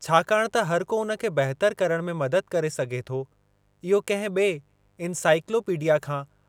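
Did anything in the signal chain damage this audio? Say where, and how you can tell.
Yes: mains buzz runs through the whole clip, entering in the analogue wiring. A steady, raspy buzz sits faintly under the speech, far below it in level, built on 50 Hz with harmonics into the kilohertz range. That comes from sharp switching spikes, twice per mains cycle, leaking in through a dimmer, rectifier or missing shield.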